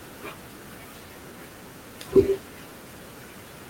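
No technical faults are audible anywhere in this speech recording.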